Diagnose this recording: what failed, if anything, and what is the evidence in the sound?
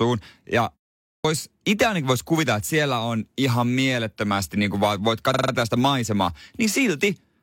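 Two things went wrong here. First, a clipped start after a pause, at the playback end. After about half a second of quiet, the speech comes back at 1.17 s with its opening sounds missing, roughly 76 ms gone, so it snaps in abruptly out of silence. That's the output device dozing off in the gap and not waking fast enough to catch the first part of the next phrase.

Second, repeated frames, in the codec or storage stage. From 5.30 s to 5.49 s one chunk of audio 46.4 ms long plays four extra times, giving a short stutter. The decoder is being fed the same compressed frame again, and it stretches the clip by about 0.19 s.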